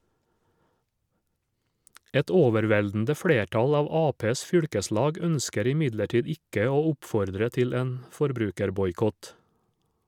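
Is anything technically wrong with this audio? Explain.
No, nothing in the speech signal shows any technical fault that a listener could point to.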